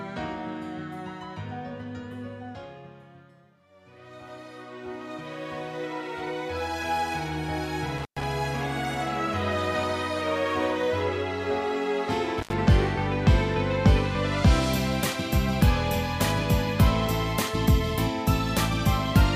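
At 7.98 to 8.24 s and again at 12.38 to 12.53 s, the sound crackles and drops to faint hiss for about 113 ms and 78 ms: intermittent contact, a loose connection briefly opening.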